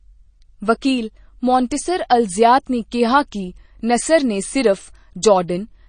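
Throughout the speech, the sound carries plainly audible MP3 compression damage, with the likely cause being an encoder starved of bits, consistent with a low bitrate around 32 kbps. The treble stops abruptly, with nothing above 9.4 kHz. Weak frequency components drop in and out from frame to frame, giving a watery, swirling texture to the sibilants and a metallic chirp on s sounds. Consonant attacks lose definition and smear.

At 1.70 s there is a pre-echo lasting about 10 ms. A sharp onset landed late within a transform block, and the quantisation noise meant to sit under the loud part was spread across the whole block, including the quiet stretch before the attack. A brief hiss comes just ahead of the transient, and the attack sounds softened and blurred rather than crisp.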